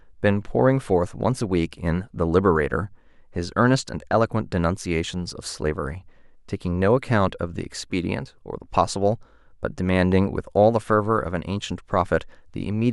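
Nothing in this speech recording stands out as a technical problem; there's no fault to point to anywhere in it.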